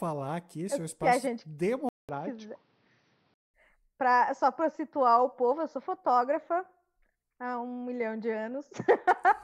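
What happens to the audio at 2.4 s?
At 2.4 s the speech is inside a stretch from 1.89 to 3.54 s where the input likely switched to a poorer device. It opens with about 200 ms of silence, then the sound turns dull and narrow, with nothing above 6.1 kHz and a new, faint noise floor, while loudness stays much the same. On a spectrogram the upper band goes empty for that span. The waveform shows a short flat gap at 1.89 s.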